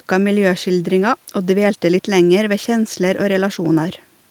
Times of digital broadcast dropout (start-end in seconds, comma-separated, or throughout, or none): none